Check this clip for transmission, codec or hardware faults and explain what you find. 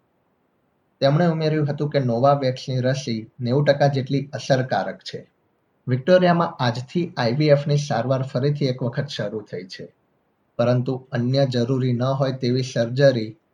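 Nothing in the signal points to a transmission, codec or hardware problem; it holds steady and continuous throughout.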